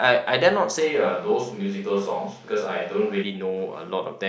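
From 0.82 s to 3.22 s the speech abruptly turns roomy and hollow, with thinner bass and a noise floor roughly 30 dB below the speech, at about the same loudness. This is likely a switch to a distant microphone. A spectrogram shows weaker low frequencies, smeared reverberant tails and a raised noise floor, with sharp edges at both ends.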